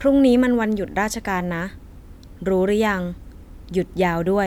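Nothing goes wrong anywhere in this bit of speech, so there's no technical fault to point out at any moment.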